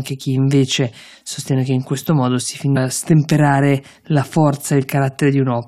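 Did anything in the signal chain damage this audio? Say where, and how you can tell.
Yes. At 2.75 s, just after "in questo modo si", the speech jumps abruptly forward with a brief blip, and the continuity of the sentence breaks. On the waveform this shows as a sudden discontinuity where the envelope does not join up. The spectrogram shows a thin vertical broadband stripe with mismatched formant tracks on either side. The stage is network delivery to playback. The likely cause is a stream segment skipped: one chunk failed to load, and the player resumed with the next.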